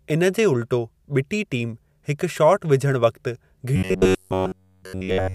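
Speech clip with robotic sound from repeated short buffers from 3.76 s to the end at 5.34 s. The audio becomes a rigid, metallic buzz at about 94 Hz. This is likely from one roughly 10.7 ms chunk being replayed in place of missing audio. The waveform shows near-identical repeating cycles, and the spectrogram shows evenly spaced harmonic lines every 94 Hz.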